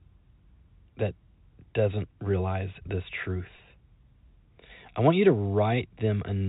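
At 3.56 s, packet loss with pitch repetition interrupts the speech for about 20 ms, to roughly 3.58 s. The gap length fits a single lost packet. Instead of leaving a hole, the receiver fills it by looping the last pitch period, so the voice briefly sounds held and slightly buzzy before normal speech resumes. The gap is too short for the fade toward silence to become audible. The concealment sits on the G.711 telephone path, whose 4 kHz band limit frames the whole clip.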